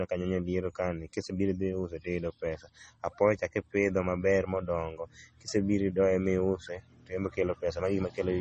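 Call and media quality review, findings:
Speech dull for the whole clip, nothing above 8.4 kHz, two different flavours of codec artefact layered together. Likely transcoding between lossy codecs, something like low-bitrate MP3 re-encoded to Vorbis. The second pass spent bits re-coding the first pass's damage and kept its cut-off.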